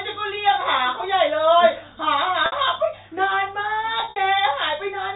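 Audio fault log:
2.46–2.52 s, packet loss with pitch repetition: the sound briefly locks into a held, slightly buzzy tone for about 60 ms, as the receiver bridges a gap consistent with three lost 20 ms packets by repeating the last pitch period.
4.00–4.16 s, packet loss with pitch repetition: a 160 ms stretch turns choppy and buzzy, with 120 ms lost in scattered gaps, the longest 60 ms. Each gap is filled by repeating the last pitch period, which fits six lost 20 ms packets.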